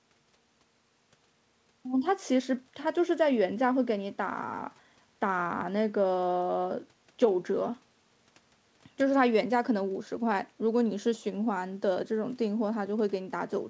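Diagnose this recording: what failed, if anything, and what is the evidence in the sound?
Nothing failed: the speech came through a call path whose band stops at 8 kHz, consistent with a wideband codec such as G.722 at 64 kbps, and no stage shows a fault.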